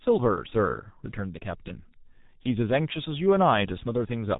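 From start to finish the speech carries heavy G.723.1 codec damage. Nothing passes above 3.8 kHz, so a spectrogram shows a flat ceiling with empty space overhead, and the harmonics below it look smeared in coarse blocks. The voice sounds muffled and hoarse, with consonants blurred, which fits a bitrate near 6 kbit/s. The codec encodes the voice in long frames and refreshes its model of it slowly, so quick changes between sounds are lost.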